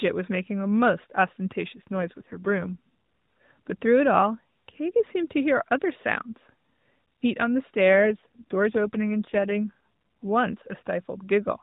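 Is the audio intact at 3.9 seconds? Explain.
Yes, the speech is intact at 3.9 seconds, carried through the AMR narrowband mobile codec with nothing breaking at that moment.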